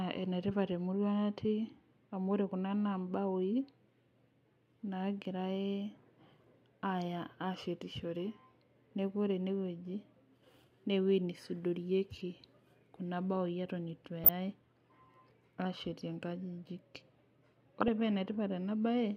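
DAB burbling breaks into the speech at 14.24 to 14.29 s, again at 15.85 s, and at 17.81 to 17.88 s. Bit errors slip past error correction into the MP2 data. Corrupted samples put short blips of noise in single sub-bands.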